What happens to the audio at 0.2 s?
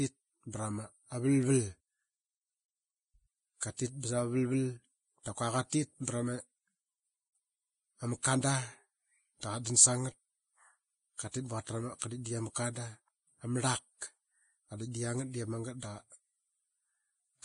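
At 0.2 s the speech is already under Vorbis compression, likely at a low bitrate near 24 kbps, and it lasts the whole clip. Nothing survives above 10.6 kHz, and the remaining treble is quantised so coarsely that fine detail turns to grainy hiss, blurring attacks.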